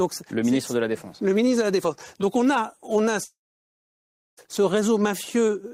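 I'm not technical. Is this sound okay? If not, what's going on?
No. Right after "on a on a", at 3.23 s, the speech breaks off into a short fading buzz and then about a second of silence until 4.39 s. This is likely a long network dropout: roughly 1.1 s of audio never arrived and is lost.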